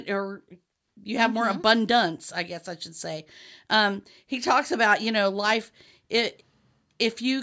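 Listening to the speech recording, nothing stood out as a technical problem at any point.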